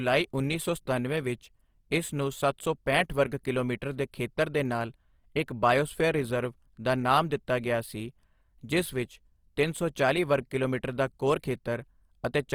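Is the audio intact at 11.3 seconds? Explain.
No. Throughout the clip, including 11.3 seconds, the speech shows Opus compression, likely from its music-style band coding at a low rate, near 24 kbps. Starved bands are refilled with folded or noise content, so tones turn plainly rough and grainy, though the bandwidth stays full, reaching about 20.2 kHz.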